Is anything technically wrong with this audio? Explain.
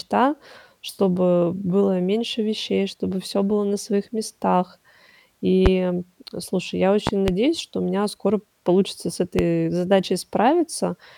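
Yes. The speech has loud pops at 5.66 to 5.69 s, 7.07 to 7.31 s and 9.39 to 9.42 s. The second event is two pops in quick succession. The first peaks about 20 dB above the speech, the others about 15 dB. A sudden voltage step or pulse, likely from a plug, switch, static or driver glitch, was added to the signal. Later circuits shaped it into a sharp thump. The speech carries on underneath.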